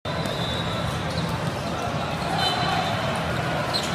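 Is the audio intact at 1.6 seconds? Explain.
Yes, the audio is intact at 1.6 seconds, with no dropout, click, distortion or other fault at that point.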